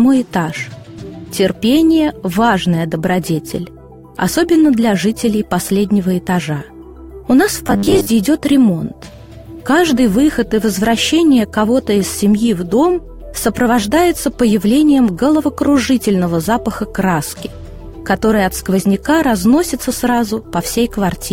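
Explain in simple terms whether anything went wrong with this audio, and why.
From 7.67 to 8.07 s the sound turns into a rigid, metallic buzz at about 100 Hz. This is robotic sound from repeated short buffers, likely caused by audio arriving too slowly, so roughly 10 ms pieces were repeated over most of that stretch.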